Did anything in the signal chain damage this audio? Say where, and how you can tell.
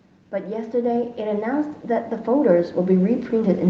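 Yes. The damage comes from the call processing stage, as automatic gain rising. From 0.3 to 1.61 s the level climbs steadily by about 6 dB, and it climbs again from 2.25 s to the end of the clip. Speech and background noise swell together, which shows the gain control lifting the whole signal after judging the input too quiet. A talker moving closer would raise the voice far more than the room. The codec's band edge near 8 kHz stays fixed throughout the swells.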